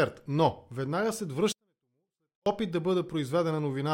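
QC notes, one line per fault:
1.52–2.46 s, 24-bit alignment error (too quiet): right after "веднага след" the speech stays clean but falls by about 48 dB and nearly vanishes. The 24-bit samples sit in the low bytes of 32-bit words and are read as full 32-bit values, so the level drops sharply.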